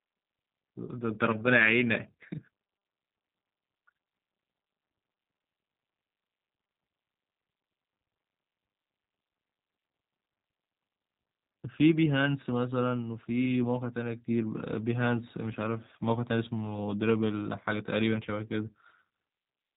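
G.729 codec damage runs throughout. Rebuilt from sparse pulses, the speech sounds rough and synthetic. Nothing passes above 3.8 kHz.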